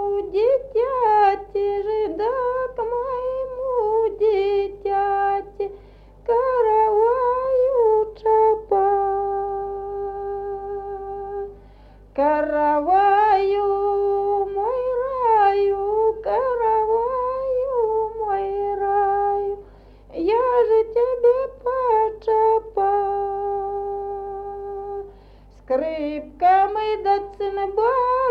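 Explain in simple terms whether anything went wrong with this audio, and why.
Nothing went wrong here that I can hear, so there's nothing to fix.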